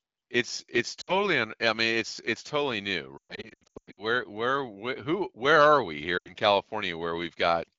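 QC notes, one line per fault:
1.01–1.13 s, lost AMR speech frames: after "it's it's", 60 ms drops out, which fits three 20 ms frames failing their checks. The decoder reuses the last pitch and vocal tract settings at falling gain, so the sound smears briefly, then "un I mean it's" returns weak or rough. The spectrogram shows frozen harmonics fading to a near-empty band, and the waveform shows a short envelope dip.
3.17–4.04 s, lost AMR speech frames: after "it's it's totally new", 520 ms is lost, scattered over 800 ms, with the longest run 120 ms. This gives repeated dips and warbles. In this wideband stream, runs fall to near silence within two frames, showing as a chain of envelope notches and faded spectral columns.
6.18–6.33 s, lost AMR speech frames: after "who where are we", 80 ms is lost, which fits about four frames. The sound drops to near silence within two frames, seen as a short gap in the waveform.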